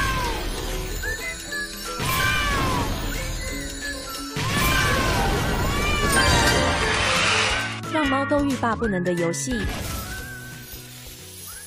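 At 1.13 s and 2.82 s, compressed frames are skipped: the audio jumps ahead about 200 ms, then about 50 ms, consistent with dropped 23.2 ms frames.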